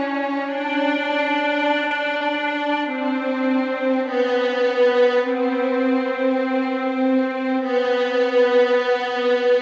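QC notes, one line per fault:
1.88–1.94 s and 2.18–2.23 s, short concealed packet loss: about 30 ms of music went missing each time, and the receiver filled the gap by extending the preceding sound before blending back in. The result is a brief smear or wobble rather than a silent gap or a hard click.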